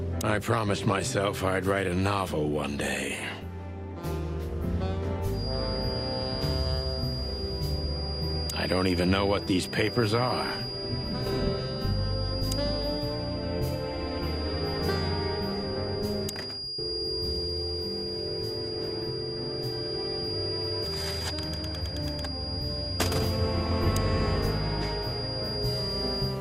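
A feedback whistle enters at 5.28 s and continues to the end of the clip at 26.41 s: a thin, steady tone at 4.8 kHz sitting roughly 10 dB below the main sound and swelling and fading slowly in level. The likely cause is a loudspeaker-to-microphone loop balanced just at the edge of feedback, so that a single high frequency keeps ringing without building up into a full howl.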